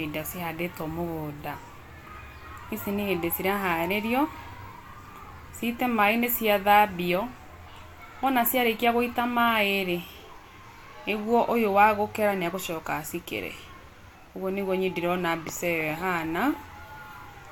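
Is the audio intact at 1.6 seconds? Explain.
Yes, the audio is intact at 1.6 seconds, with no dropout, click, distortion or other fault at that moment.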